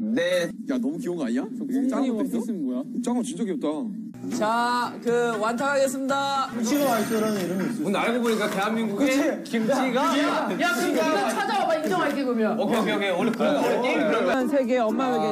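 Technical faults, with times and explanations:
13.34 s, electrical switching spike: a sharp snap lasting only a few milliseconds, reaching about -15 dBFS and sitting on top of the sound rather than replacing it. The very short duration and abrupt, broadband onset are typical of an electrical arc being picked up by the audio line, most likely from a nearby switch, motor or static discharge. Because the disturbance is so brief, it is heard as a click rather than a tone or hum.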